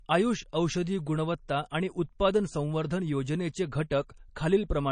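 Throughout, likely MP3 compression at a low bitrate fitting 32 kbps cuts everything above 9.4 kHz and drops weak detail, leaving the speech dull, watery and swirly.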